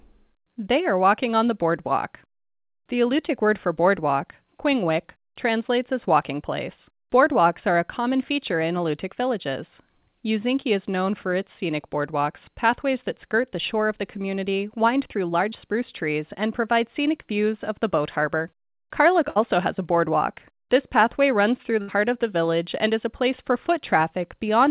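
From 15.50 to 15.54 s there is a short concealed packet loss: about 20 ms of the call failed to reach the decoder in time, and the receiver covered roughly 16 ms of the hole by extending the preceding sound before blending back into the real signal. The result is a brief smear or wobble, heard through the narrowband G.711-style channel, which carries nothing above 4 kHz.

Two bursts of packet loss follow, at 19.30 to 19.38 s and at 21.82 to 21.90 s. Each time, a run of about 60 ms of audio was lost or arrived too late to be played. The receiver filled the gap by continuing the last sound and letting it decay, for about 59 ms in the first burst and 64 ms in the second. A listener hears a held buzz or a fading hiss, and then the audio resumes further on with that stretch missing.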